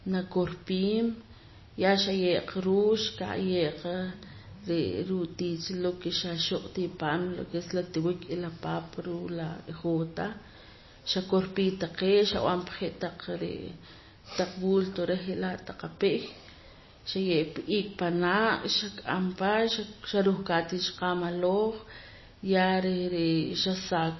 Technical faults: MP3 compression

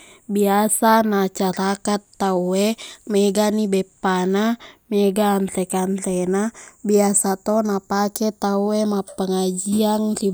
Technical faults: channels drifting apart

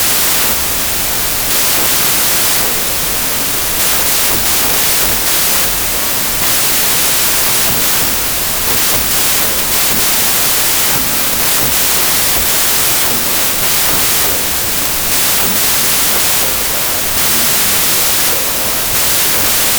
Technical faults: wrong sample width

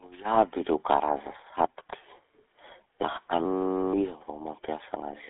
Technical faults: GSM full-rate codec

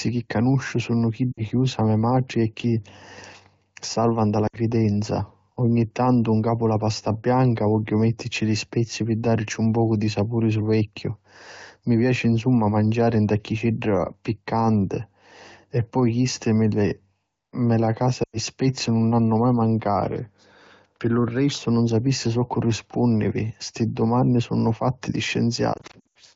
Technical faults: lost AMR speech frames

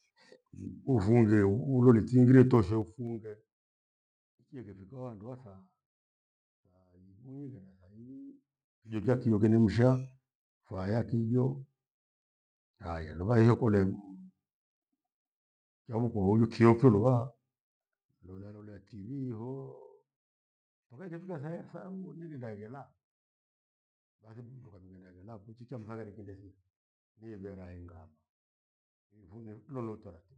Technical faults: zipper noise

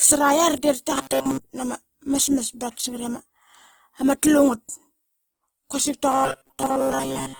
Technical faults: Opus compression; robotic sound from repeated short buffers

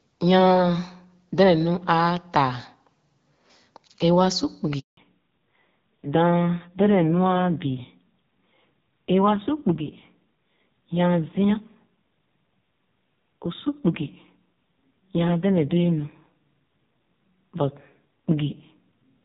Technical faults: handover gap; fallback to narrowband

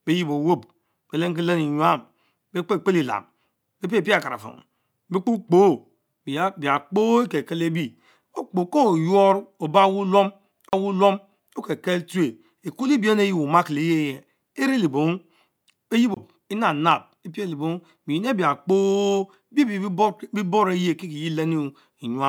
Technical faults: CD skip

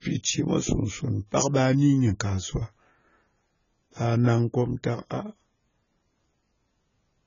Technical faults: AAC compression

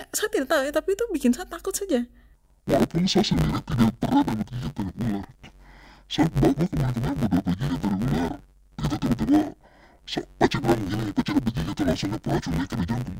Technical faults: interleaved audio read as planar

